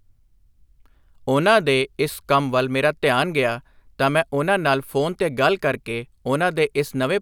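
No technical faults can be heard anywhere in the recording.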